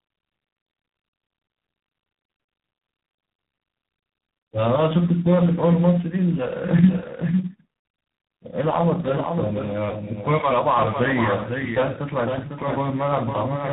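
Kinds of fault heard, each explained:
Tandem speech coding: the speech passes through three speech coders in a row, and each one re-codes the previous one's damage. The roughness and warble point to a chain like AMR-NB, then CVSD, then G.726, with G.711 joining the links. The sound is muffled, gritty and warbling throughout. On a spectrogram, energy stops sharply at about 3.8 kHz, and the harmonics look smeared and blotchy rather than cleanly striped.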